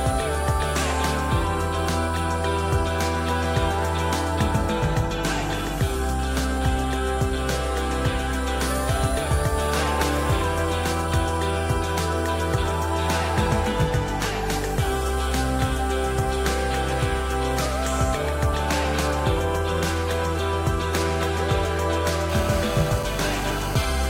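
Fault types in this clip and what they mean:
GSM phone buzz: a 2G handset close to the recording chain is transmitting in short radio bursts about 217 times a second, and some stage of the audio circuit rectifies those pulses into the audible band. From 22.30 s to 23.82 s the sound picks up a hard, raspy buzz at that rate, rich in harmonics and about 14 dB below the signal, with no relation to the material. It holds steady throughout, consistent with a phone in an active call rather than a data transfer.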